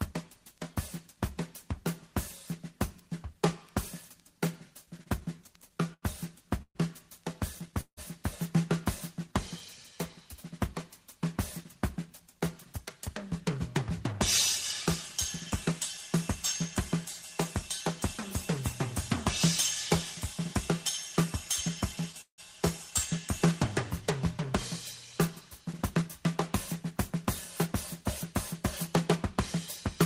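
From 4.85 to 7.99 s the audio stalls repeatedly. These are jitter-buffer underruns, with 15 gaps (longest 164 ms) filled by about 512 ms of continued sound, 16% of the span. Nothing is lost, but the audio drags and stutters. On a spectrogram the gaps appear as short horizontal smears where the last spectrum is held and fades in the longer gaps.

From 11.64 to 14.13 s a jitter buffer speed-up plays the audio at 106% speed with the pitch unchanged. Short pitch-period slices are trimmed out, about 150 ms in total, which shortens the waveform without shifting harmonic frequencies, so the passage sounds hurried.

From 21.96 to 22.40 s the stutter returns. Three gaps (longest 167 ms) are filled with 185 ms of held sound, 42% of that short span, and show as stretched, frozen patches.

From 25.95 to 30.05 s a second speed-up plays at 105%, removing roughly 200 ms, and again sounds rushed at the same pitch.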